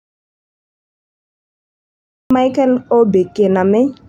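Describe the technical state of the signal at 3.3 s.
At 3.3 s the speech signal is intact, with no audible dropout, clipping, distortion or other fault at that moment.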